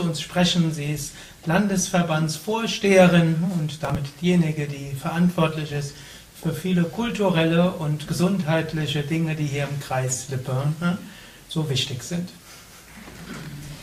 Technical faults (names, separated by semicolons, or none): processor overload crackle